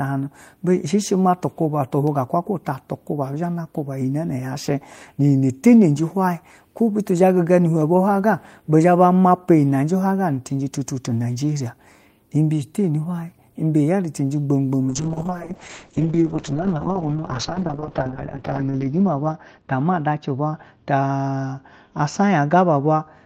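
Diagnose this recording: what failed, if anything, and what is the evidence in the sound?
A call bitrate drop at the network and codec stage starts at 14.9 s, after "cenje gbamgbam", and lasts to the end. The speech turns rough and muffled. A spectrogram shows everything above 6 kHz cut away, which fits the encoder falling from about 32 to 6 kbps.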